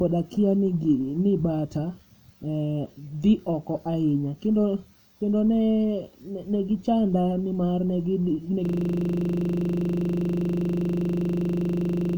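At about 8.65 s the speech gives way to a system hang loop that runs right to the end. Something froze, probably the machine or the audio driver, while the sound hardware kept replaying the same stretch of its ring buffer. That stretch is 40 ms long, so it repeats 25 times a second, close to ninety times in all. It comes across as a rough, rattling buzz at 25 Hz instead of anything recognisable as speech.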